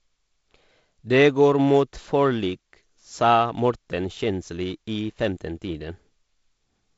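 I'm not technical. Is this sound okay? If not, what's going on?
Yes, this sound is okay, and nothing is going wrong in it.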